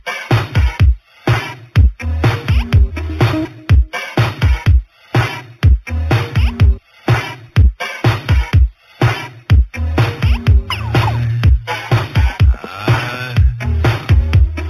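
Throughout, a faint metallic shimmer sits at 4 to 8 kHz, around 30 dB down, over a dulled top: imaging from linear upsampling, 8 kHz to 48 kHz.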